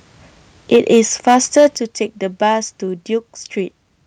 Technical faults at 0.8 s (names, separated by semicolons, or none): microphone overload; microphone volume stepped down